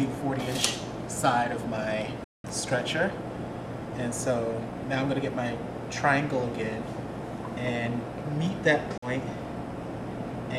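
At 2.24 s the sound cuts to silence until 2.47 s. It drops out again from 8.98 to 9.08 s. Both gaps are likely a Bluetooth dropout. Packets arrived too late and were discarded. Playback then resumes further along, skipping about 198 ms and 46 ms of audio.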